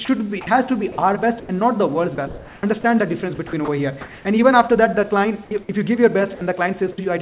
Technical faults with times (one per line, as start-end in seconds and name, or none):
0.05-1.49 sound chopped by the voice detector
2.15-2.63 sound chopped by the voice detector
3.35-4.25 sound chopped by the voice detector
6.35-6.41 sound dropped by the voice detector
6.92-6.98 sound dropped by the voice detector